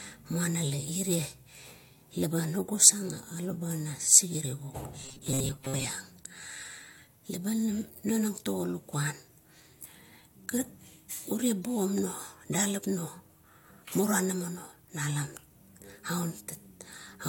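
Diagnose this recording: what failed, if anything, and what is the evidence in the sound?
Between 5.03 and 5.85 s the speech collapses into a rigid, metallic buzz at 134 Hz that still loosely tracks the syllables: robotic sound from repeated short buffers. The likely failure is at the driver or buffer stage. Fresh audio stops arriving on time, so a block of about 7.5 ms, one period of 134 Hz, is replayed over and over. Most of that stretch is repeated material, which imposes the fixed pitch and discards the real signal underneath.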